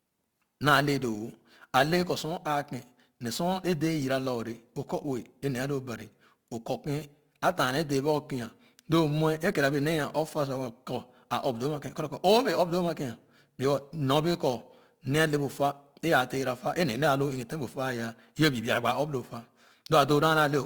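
Throughout the speech there is sample clock jitter: the converter clock wanders by roughly 10 microseconds, turning steep waveform slopes into error about 20 dB below the signal. It sounds like hiss on loud, bright syllables and vanishes in pauses. A spectrogram shows broadband haze only under speech.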